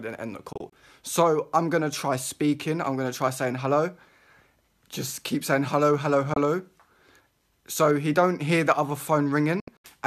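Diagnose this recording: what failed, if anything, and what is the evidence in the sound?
The reception chain broke up in a digital broadcast dropout. The sound mutes in short holes with quick fades of about 3 ms at 0.53–0.73 s, 6.34–6.37 s and 9.60–9.87 s. The hole lengths fit lost 24 ms frames, and the decoder muted until good frames returned.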